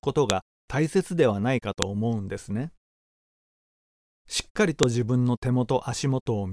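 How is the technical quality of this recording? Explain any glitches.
The recording has one recurring fault: a file header played as audio, at 0.30, 1.82 and 4.83 s. Each time, a new piece begins with its header bytes still attached, and those bytes are read as sample values, producing a brief, sharp click or snap.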